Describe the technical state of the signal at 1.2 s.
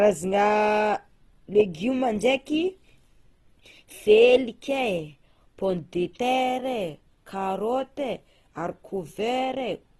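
At 1.2 s the speech carries Opus compression damage that runs through the whole clip, so this moment is no exception. Nothing sounds above 12.1 kHz, and what remains is grainy and rough, with bands kept at full energy but filled with folded or noise-like content rather than precise detail. That texture likely comes from the music (CELT) mode at a low rate, which fits about 16 kbps. Unlike MP3 damage, there is little swirling or hollow warble.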